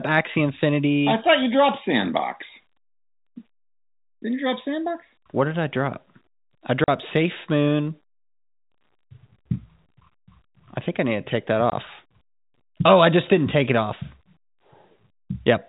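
At 6.84 s a 40 ms hole and at 11.70 s, just after "need to take that", a 20 ms hole: packet loss filled with silence, fitting lost 20 ms packets. Each gap has hard edges and shows as a flat waveform and a blank vertical stripe on the spectrogram.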